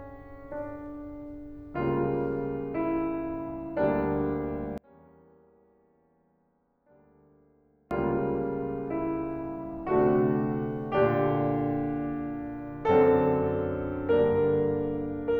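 One channel inverted, from 4.78 to 7.91 s: the music falls by about 31 dB, and the sound common to both channels nearly vanishes, leaving only a faint residue. The likely cause is reversed polarity on one stereo channel, so everything common to both cancels when summed to mono.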